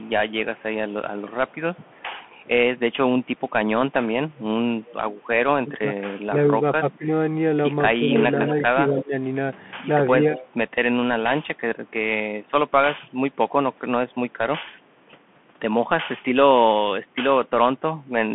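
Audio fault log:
Throughout: Bluetooth CVSD headset codec. The speech has that narrowband headset sound, with nothing above about 3.8 kHz. A one-bit up/down coder at 64 kHz can't keep pace with sharp, loud highs, so s sounds come out scratchy and a grainy hiss sits under everything.
0.00–2.03, 4.84–4.93, 8.47–8.51, 10.38–10.49: echo leak. A delayed copy of the speech trails it by 208 ms, very quiet in the first stretch and louder in the later short scraps. It's likely a speakerphone on one side whose echo canceller let some of its own playback back through.
5.62–10.25, 17.04–17.08: speech suppressed in double talk. The talker's level dips, by up to about 15 dB, in patches adding up to around a second and a half in the long span, plus a brief 40 ms dip later. That's likely an echo canceller confused by both sides talking and ducking both its own talker and the echo.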